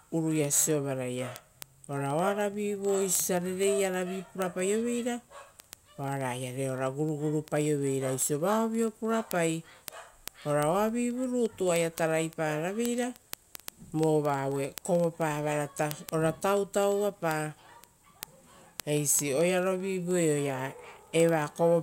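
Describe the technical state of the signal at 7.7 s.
At 7.7 s the signal carries word clock ticks, part of a run from 0.14 s to 21.81 s. The receiving device is not locked to the sender's clock, which is off by roughly 500 parts per million. Each time the clocks slip, one sample is dropped or repeated, giving sharp ticks of uneven strength about every 0.04 s. Random clicks or dropouts would not keep that strict, steady rate through the speech.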